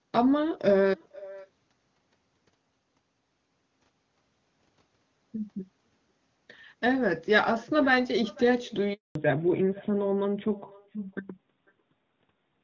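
A faint, hollow repeat trails every phrase from the first second to the last, arriving about half a second late and sitting about 22 dB below the direct speech. This is echo with no canceller: the far end's loudspeaker feeds its microphone, and nothing strips that copy out before it returns.

At 8.93 s the speech suddenly drops to silence for 220 ms, resuming at 9.15 s. That clean hole is a handover gap. The call moved between networks, and no speech frames arrived while the new link was set up, so that stretch is simply missing.

From 9.15 s to the end the sound turns duller and rougher, with nothing left above 4 kHz. This is a fallback to narrowband. The call left HD Voice, and the sound before the drop fits AMR-WB at its top 23.85 kbit/s rate, while after it the band limit suggests AMR-NB at 12.2 kbit/s.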